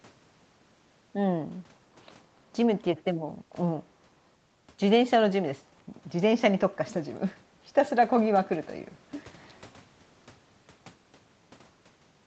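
No technical faults can be heard in this speech; the lowest bass is trimmed, as expected from a call's microphone processing.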